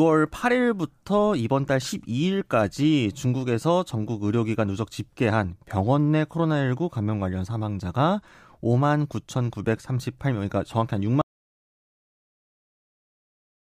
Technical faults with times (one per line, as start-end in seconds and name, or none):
11.21-13.68 audio dropout to silence